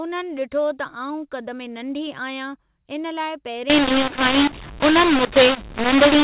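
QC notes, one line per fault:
3.70 s to the end at 6.23 s, mu-law and A-law mixed up: telephone audio coded as mu-law is decoded here as A-law, so each sample's level is scrambled, with some too loud, some too quiet, and the faintest lifted well above silence. The speech turns harsh and gritty, and the pauses fill with hiss. On the waveform, the envelope goes jagged and the gaps never reach zero. On the spectrogram, broadband noise smears up to the 4 kHz ceiling that the telephone coding imposes, with no clean silence between syllables.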